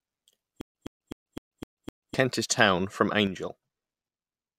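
Stutter with silent gaps from 0.61 to 2.14 s: a 117 ms fragment of speech repeats six times, each followed by 138 ms of digital silence, a steady 255 ms cycle. This is likely a stalled stream replaying its last buffer, and the speech due in that stretch is lost.

One channel drops out at 3.27 s and stays out to the end. The level falls abruptly by about 6 dB, as material shared by both sides loses half its contribution to the mono sum. Anything present only in the missing channel vanishes, likely from a lost stereo side.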